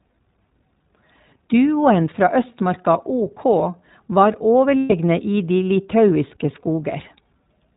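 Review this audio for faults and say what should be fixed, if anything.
The iLBC codec affects the whole clip. Nothing above 4 kHz survives, so the speech sounds narrowband, rough and slightly synthetic. The coding damage is plainly audible, and its character fits the 15.2 kbps mode with 20 ms frames. Use a wideband codec instead.

Lost iLBC frames cause a dropout from 4.80 to 4.93 s. The decoder repeats the last pitch cycle mixed with noise, so the gap sounds like a held, buzzy vowel. The gap lasts about 120 ms, which points to six missing 20 ms frames. The voice recovers at once. Add jitter buffering or forward error correction.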